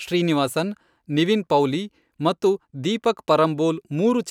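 No audible technical faults.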